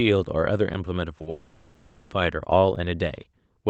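The stream arrives in pieces about 1 second long, and there is a gap between chunks of roughly 6.5 ms at each join. No audio is lost, but the flow breaks at 0.74 s, 1.75 s and 2.75 s. Each break is a tiny hole, and they fall at a regular one-second spacing.

At 1.18 to 1.22 s and again at 1.22 to 1.28 s, packets carrying 20 ms and then 40 ms of speech miss the decoder. These are two back-to-back cases of short concealed packet loss. The receiver fills each hole by stretching the preceding sound and then blends back into the real signal. Together they make a brief smeared wobble of about 60 ms.

From 1.30 to 2.13 s, the likely cause is a long network dropout, with about 800 ms of speech never arriving. The concealment keeps extending the last sound across the whole stretch rather than falling silent, so it sounds like a drawn-out synthetic buzz or hiss in place of speech. The join at 1.75 s falls inside this stretch. 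The speech then resumes further on, with that portion missing.

Throughout, the Opus call path at 24 kbps limits the audio to about 8 kHz, so the top end is dull.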